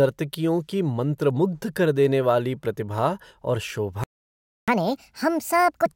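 At 4.04 s, right after "देने वाली प्रतिभा और", the speech cuts out and the output stays silent until 4.68 s, a gap of about 0.64 s. This is a playback stall: the signal stops in mid-flow and then resumes. The likely cause is the player running out of buffered data or its output thread being blocked, so nothing reached the output during that interval.

From 4.68 s to 5.86 s the player performs a catch-up at higher speed, draining its backlog by resampling. Playback runs at 1.5 times normal rate, so the speech is both hurried and shifted up by roughly seven semitones, giving a thin, chipmunk-like quality. Because resampling changes tempo and pitch together, the two cannot be separated here. Near 5.86 s the rate and pitch return to normal.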